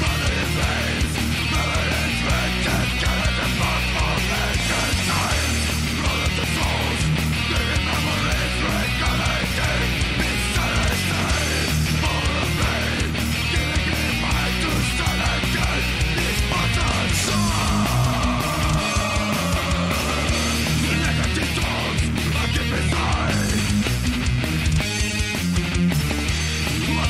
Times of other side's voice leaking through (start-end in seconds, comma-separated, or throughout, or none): none